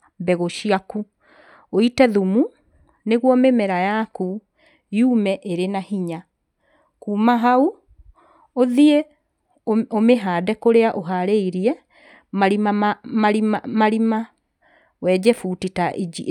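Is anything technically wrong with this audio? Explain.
No, nothing technically wrong can be heard anywhere in this speech recording.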